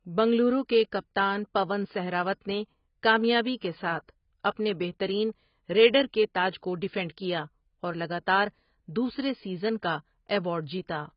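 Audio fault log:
Throughout, AAC compression: the speech has nothing above 5.4 kHz and sounds dull and smeared, with warbling, fizzy sibilants. This is likely low-bitrate AAC-LC starving the spectrum and quantising coarsely, consistent with roughly 16 kbps.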